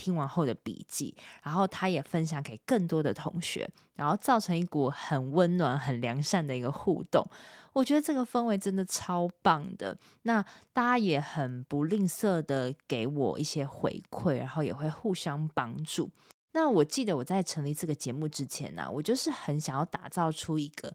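No technical faults are audible anywhere in the recording.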